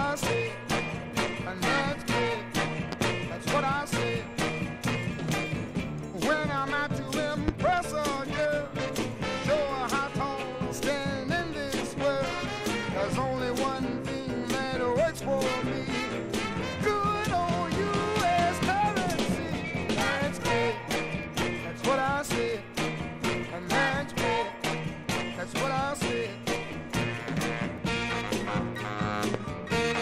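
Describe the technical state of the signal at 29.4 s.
A single loud pop sits between 29.34 and 29.37 s, peaking roughly 20 dB above the surrounding sound, which continues beneath it. It is likely caused by a sudden voltage step or pulse, such as a switch, plug, static discharge or driver glitch, that the downstream circuitry shaped into a brief thump. On the waveform it shows as a tall, narrow spike. On a spectrogram it appears as a thin vertical stripe spanning the frequency range.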